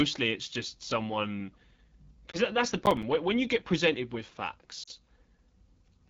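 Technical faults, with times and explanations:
Throughout: AMR wideband (HD Voice) codec at 8.85 kbit/s, one of its lowest rates, so the speech is plainly rough and raspy. The pulse-driven model covers up to 6.4 kHz, and above that a spectrogram shows a smeared band of shaped noise reaching 7 kHz, with nothing higher.
2.32 to 2.44 s: lost AMR speech frames. One 20 ms frame was lost just before "that's the". The decoder reused the previous pitch and vocal tract settings at falling gain, which gives a brief warble and dip. The waveform shows a short sag, and the spectrogram shows harmonics held flat briefly.
2.83 to 3.03 s: processor overload crackle, right after "that's the". Around seven missed buffers of about 5 ms each were filled with silence and have hard edges. The result is a gritty crackle riding on the speech. The waveform shows tiny dropouts, and the spectrogram shows vertical broadband clicks.
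4.83 to 4.89 s: lost AMR speech frames. Two frames, 40 ms in total, were lost after "you get presented with". The concealment drops the sound to near silence within the two frames, so it returns weak for a moment. The spectrogram shows a smeared, fading patch, and the envelope drops briefly.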